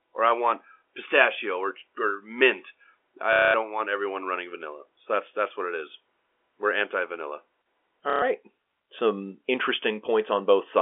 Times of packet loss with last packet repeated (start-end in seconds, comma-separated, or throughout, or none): 3.33-3.54, 8.10-8.22